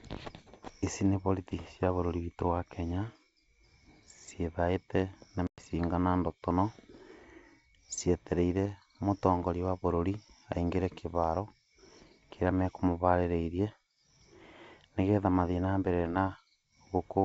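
At 5.47 s the speech cuts to a hard-edged silence lasting about 110 ms, to 5.60 s, which fits a loss of roughly ten packets on this G.722 wideband call. This is packet loss on an ADPCM call. Because ADPCM codes each sample as a change from the last, the receiver's adaptive predictor and step size lose track of the sender's during the gap. Speech therefore comes back slightly distorted before settling within a few tens of milliseconds. That mismatched restart sets it apart from a plain dropout, which resumes cleanly, and from concealed loss, which would fill the hole rather than leave silence.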